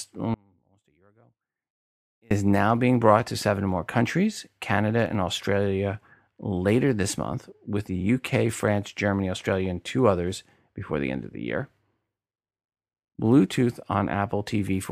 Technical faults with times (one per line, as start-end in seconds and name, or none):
0.34-2.31 audio dropout to a faint residue